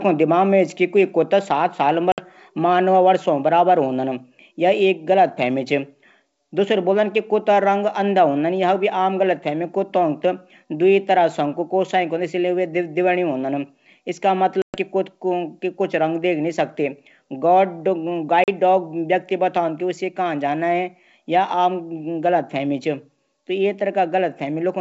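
Speech on a wideband G.722-style call, clear up to about 7 kHz, is cut by packet loss on an ADPCM call at 2.12 to 2.20 s, 14.62 to 14.77 s (the longest, 120 ms of lost audio) and 18.44 to 18.49 s. Each gap is a hard-edged silence. Unlike a plain dropout, the speech comes back slightly distorted and settles within tens of milliseconds, because the decoder's adaptive predictor and step size have drifted from the sender's.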